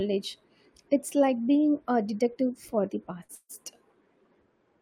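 At 3.23 s a packet arrived late and the jitter buffer ran dry, so the receiver stretched the last speech sound for about 56 ms until it came. This short stall from a late packet holds one sound too long with a faint buzz or dip, then resumes with nothing lost.

From 3.35 to 3.51 s a call audio freeze follows, likely caused by packets held up in transit emptying the buffer again. The last sound carries on as a fading buzz or hiss, 144 ms of fill in all, ending in about 50 ms of silence, before speech picks up exactly where it stopped.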